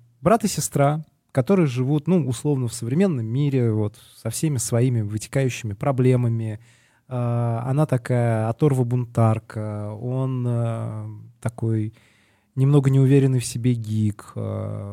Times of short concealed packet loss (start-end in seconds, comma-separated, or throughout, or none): none